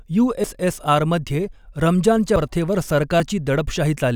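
Dropped buffers at 0.44, 2.36 and 3.2 s: the speech jumps ahead, skipping a short slice each time, likely from an overrun discarding unread samples.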